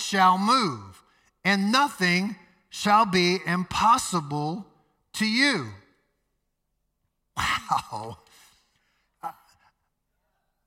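Speech recording with no technical faults heard anywhere.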